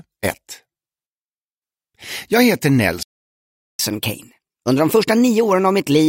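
The audio cuts to silence at 3.03 s and stays silent until 3.79 s, a gap of about 0.76 s. This is a playback stall, most likely the player running dry of buffered data or having its output thread held up. It is not a codec dropout or a lost packet, which would leave a much shorter gap. Here the silence is long and clean. From 3.79 s to the end the player is in catch-up at higher speed. It resamples its backlog at 1.15 times normal speed, so tempo and pitch rise together, by roughly two semitones. A pitch-shift fault would change pitch while keeping the timing. In this clip both rise at once, and the rise starts at the instant the stall ends, which marks it as the player working off the delay.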